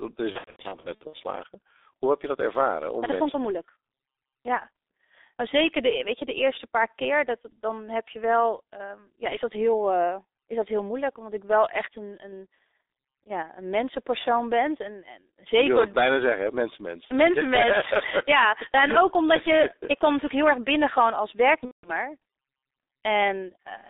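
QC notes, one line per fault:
throughout: G.723.1 codec, 6.3 kbit/s speech squeezed into a 300 Hz to 3.7 kHz line with heavy damage, so voices sound muffled, hoarse and consonant-smeared rather than merely band-limited.
0.32 to 1.16 s: VoIP packet loss concealed by the speech codec, about 420 ms missing in scattered gaps over roughly 0.8 s, longest 90 ms, heard as buzzy stretched fragments that fade, unlike clean dropouts.
21.65 to 21.90 s: VoIP packet loss concealed by the speech codec, just after "erg binnen gewoon als", about 180 ms lost, the decoder smearing the last sound into a fading buzz before recovering weakly.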